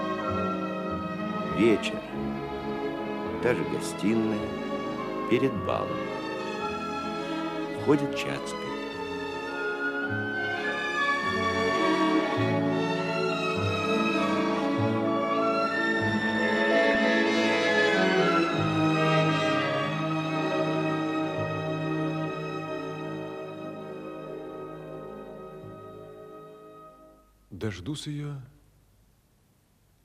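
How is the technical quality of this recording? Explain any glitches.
There is one glitch, a short burst of DAB burbling from 16.91 to 16.95 s. Weak reception let a small share of bit errors, around a tenth of a percent, slip past error correction into the MP2 data. Corrupted samples put short blips of noise into individual sub-bands, giving a few brief watery blips. Unlike a dropout, the sound never goes silent, and its length points to a handful of damaged frames.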